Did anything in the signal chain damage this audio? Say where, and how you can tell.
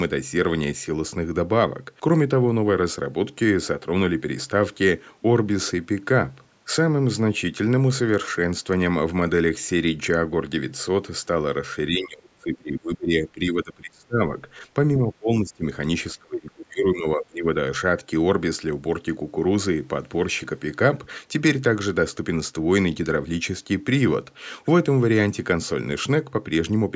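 Yes. Speech sinks and breaks up from 11.89 to 14.2 s, 15.04 to 15.64 s and 16.14 to 17.47 s, by up to about 25 dB. The likely cause is speech suppressed in double talk, in call processing. The echo canceller mistook the talker for echo and turned it down.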